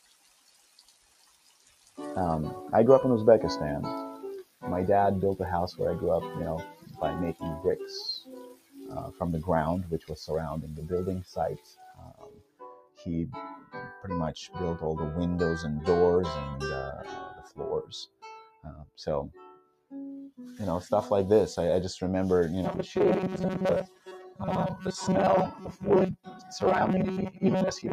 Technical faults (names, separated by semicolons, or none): noise suppressor applied to music or sounds; sound cut by the noise suppressor; robotic sound from repeated short buffers